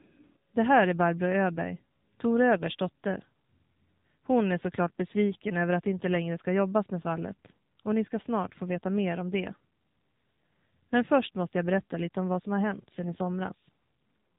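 AMR narrowband mobile codec damage runs through the whole of this speech recording. The voice is squeezed into a telephone band with nothing above 4 kHz, and it has a plainly audible buzzy, synthetic edge. That happens because the codec rebuilds each 20 ms frame from a vocal-tract model excited by a handful of pulses. The degree of coarseness fits a low AMR-NB mode around 7.4 kbps. AMR bit errors break in twice: from 2.57 to 2.62 s, and from 13.06 to 13.14 s just after "som har hänt sedan". Both bursts keep roughly the right pitch and loudness but turn hoarse, scratchy and gargly. That points to flipped bits in the less protected parts of the frame, at a rate of a few percent, which lands excitation pulses in the wrong places and skews the fine pitch, gain and spectral values. The durations fit three or four corrupted frames per burst.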